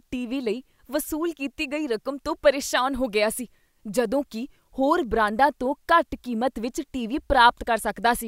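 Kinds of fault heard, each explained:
Electrical switching spike: a nearby switch or motor likely arced into the audio line, adding one brief, fairly quiet snap of about -30 dBFS at 5.27 s, after "ਸੀ ਜਦੋਂ ਕੀ ਹੋਰ".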